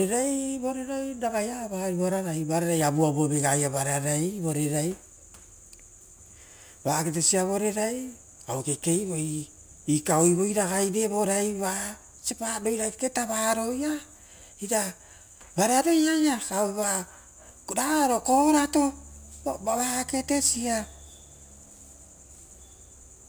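Throughout the recording, a crude rate conversion raised the sample rate by simply repeating the nearest sample, with no filtering. The uneven repeat pattern fits a 3:2 step from 32 kHz to 48 kHz. The stepped waveform leaves an error only around 15 dB below the speech, at frequencies unrelated to the voice. It is heard as a gritty, inharmonic fizz riding on the speech, strongest on loud syllables and sibilant, high-frequency sounds.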